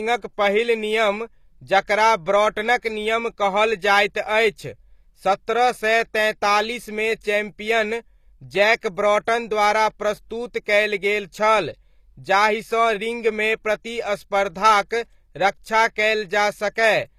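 A speech recording whose sibilants and upper treble sound gritty and metallic throughout, with plainly audible codec damage. The bright top end doesn't quite match the body of the voice. That points to HE-AAC compression, likely at a low bitrate around 24 kbps, where the treble is rebuilt from copied lower bands rather than coded directly. At 8.81 to 8.83 s, just before "ब्रॉटन द्वारा", a brief hiss of about 24 ms smears the following attack. This is pre-echo: quantisation noise spread across a transform block leaks into the quiet moment ahead of the sharp onset.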